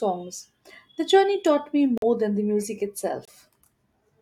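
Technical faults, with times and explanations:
1.98 to 2.04 s, corrupt frame muted: After "journey taught me", the sound drops abruptly into silence for about 63 ms, a gap of several frames. The decoder rejected damaged compressed frames, and the player filled them with silence. Timing holds.
3.25 to 3.30 s, corrupt frame muted: After "than the music", a sudden 42 ms hole appears, consistent with a single rejected frame. Silence replaces it, and the audio resumes on time.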